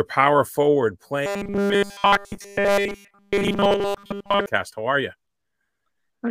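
From 1.26 s to 4.46 s the speech turns into robotic sound from repeated short buffers. A rigid metallic buzz at 200 Hz sets in. New audio likely arrived too seldom, so a 5 ms slice looped, with almost nothing fresh getting through.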